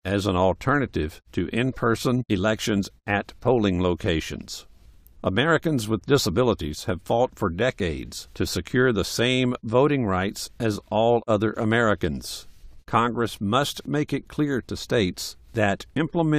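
No technical faults are audible anywhere in this speech recording.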